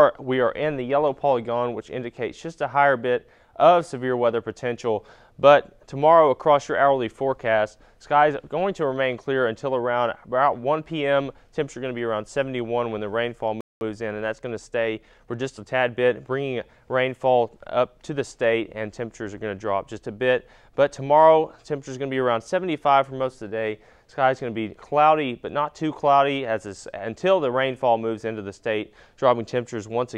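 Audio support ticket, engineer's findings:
Playback stall, 13.61 to 13.81 s: output goes silent mid-flow for about 0.2 s, then resumes. Likely player starved of data or its thread blocked. The sound resumes after the gap and the timeline then has to catch up, unlike a brief dropout click.

Time-compressed catch-up, 13.81 to 15.83 s: audio runs hurried at 1.1x with pitch unchanged. The player trims the post-stall backlog by cutting and cross-fading small slices. Constant pitch rules out a resampling speed-up, which would raise it.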